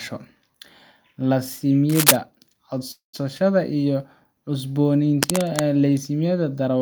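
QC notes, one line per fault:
1.89–2.17 s and 5.23–5.64 s, cable scratch noise: dense, uneven bursts of crackling rustle sit over the speech, the first loud enough to rise above it by roughly 5 dB, the second quieter at about 5 dB below it. The likely cause is a worn cable or connector being moved, its contact resistance jumping about. Unlike a steady hum or hiss, the noise is irregular and short-lived, and the speech underneath carries on unbroken.
2.91–3.15 s, call audio freeze: the last sound is stretched into a fading buzz for about 220 ms, with roughly the final 120 ms gone to silence, then speech resumes exactly where it stopped, nothing skipped, so everything after arrives about 220 ms late. This is likely a jitter buffer running dry while packets were held up. That sets it apart from a dropout, where a piece of the speech would be cut out rather than delayed.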